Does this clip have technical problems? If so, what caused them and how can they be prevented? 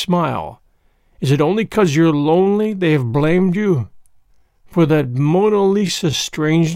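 Yes. From 1.81 s to the end, the speech drags at 0.71 times its pace with unchanged pitch, likely a time-stretched section. Prevent it by avoiding length-fitting stretches during editing.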